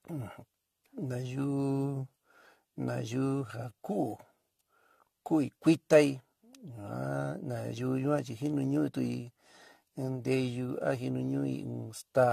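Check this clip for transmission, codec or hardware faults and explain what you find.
One codec fault runs through the whole speech recording: generation loss.

The likely cause is repeated lossy coding. The audio seems to have been passed through AAC-LC around seven times, at what sounds like 64 kbit/s. Each decode and re-encode quantises the signal again on a shifted frame grid, so the noise and missing spectral regions pile up. From start to finish the speech sounds swirly, smeared and hollow, consonant attacks are blurred, and nothing remains above 14.1 kHz.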